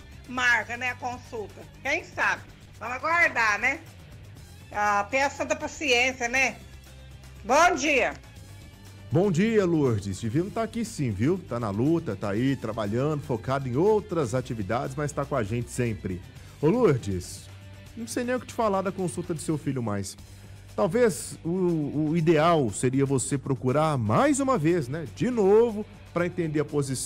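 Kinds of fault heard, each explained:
Call bitrate drop: from 2.18 to 3.45 s, the sound coarsens for about 1.2 s and then returns to full detail. The call's bandwidth estimate fell, so the encoder was told to spend far fewer bits. The change in quality suggests a fall from roughly 96 kbps to about 12 kbps. At that rate the codec quantises the signal much more crudely and trims the upper frequencies, leaving the audio rough, watery and muffled until the bitrate recovers.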